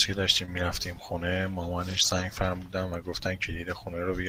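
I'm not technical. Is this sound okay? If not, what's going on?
No. At about 0.45 s the speech has a very brief smear or wobble. This is a short concealed packet loss: about 20 ms of the call arrived too late, so the receiving end filled the gap by stretching the sound just before it.

From about 1.89 to 2.23 s the voice turns rougher and noisier for a moment, though nothing drops out. This is a lost packet rebuilt from error correction: several separate lost pieces were replaced with the cruder backup copies sent alongside them.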